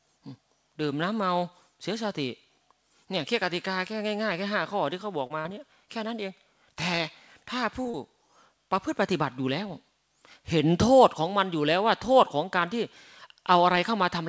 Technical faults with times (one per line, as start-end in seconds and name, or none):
5.27-5.48 short concealed packet loss
7.82-7.96 short concealed packet loss